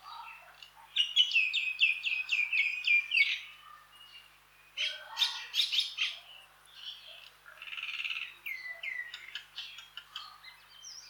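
A mains buzz runs through the whole clip: a steady, raspy buzz sitting roughly 40 dB below the audio, built on 50 Hz mains. Sharp switching spikes, twice per cycle, point to a dimmer, rectifier or unshielded lead. A spectrogram shows evenly stacked horizontal lines at 50 Hz multiples reaching several kilohertz. In quiet passages the waveform shows small spikes repeating every 10 ms.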